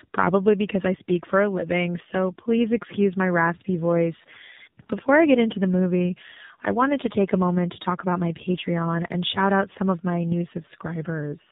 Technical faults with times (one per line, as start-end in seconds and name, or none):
0.00-11.51 tandem speech coding